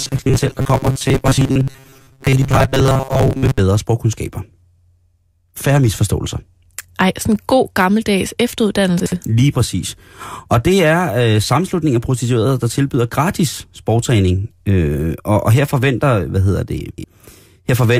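From the very start, 0.01 to 3.6 s, the speech has a robotic sound from repeated short buffers: a stiff metallic buzz around 134 Hz that still tracks the words. Audio was likely arriving too rarely, so roughly 7.5 ms snippets got looped over most of that stretch.

Then there are chunks out of order. At 9.0 to 9.12 s a 60 ms piece lands one chunk late, and at 16.8 to 17.04 s, right after "her forventer hvad hedder", one shows up three chunks late. Both come across as a brief jumbled blip.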